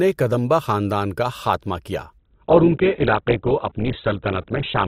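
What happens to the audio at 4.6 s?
At 4.6 s you're inside a stretch where the adaptive stream has dropped to a lower bitrate. It kicks in at 2.18 s, right after "خاندان کا خاتمہ کیا", and runs to the end of the clip. The connection slowed, so the player switched to a leaner encode without any gap. The speech turns dull, with nothing above about 4.2 kHz. That fits a fall from a roughly 64 kbit/s Opus stream to one near 8 kbit/s.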